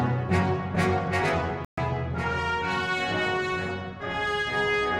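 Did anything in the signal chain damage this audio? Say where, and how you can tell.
Yes: a digital broadcast dropout at the receiver muted output from 1.65 to 1.78 s, a 128 ms silent hole consistent with four lost frames, before sound resumed.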